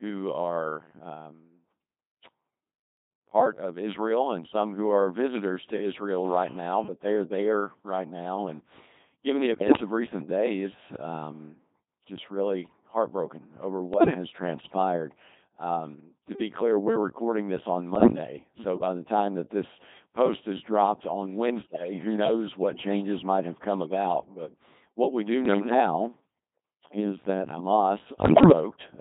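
Throughout, the speech has the steady robotic buzz of the Codec 2 vocoder, consistent with about 2.4 kbit/s. It is rebuilt from sine waves inside a 150 Hz to 3.7 kHz band, with heavy and constant damage. Bit errors on digital voice radio stand apart as brief bursts at 9.54, 13.94 (after "just really heartbroken over"), 17.96, 21.62 (between "post is dropped on" and "who knows what changes"), 25.46 (after "what we do") and 28.12 s. In each, corrupted frame parameters make the pitch, level and tone colour jump into warbling gibberish.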